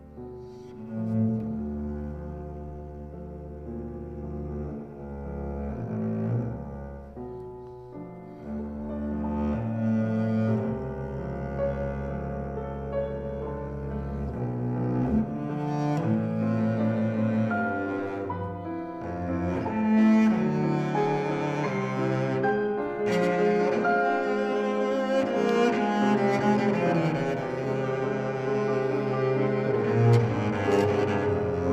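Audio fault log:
25.49–25.51 s, loud pop: a single sharp pop, a few dB above the surrounding level, sits on top of the sound, which continues unbroken underneath. The brief pulse likely comes from a voltage step such as a switch, plug or static discharge.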